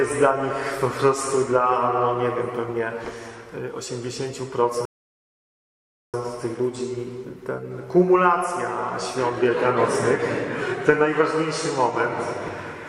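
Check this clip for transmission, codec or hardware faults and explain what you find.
There is one fault, a rebuffering stall, running from 4.85 s to 6.14 s. The sound drops abruptly to silence, then picks up again at exactly the point where it broke off, with nothing skipped. The player exhausted its downloaded audio and halted playback until more data arrived, so the content is intact but about 1.28 s of dead time is inserted, stretching the clip's timeline by that amount.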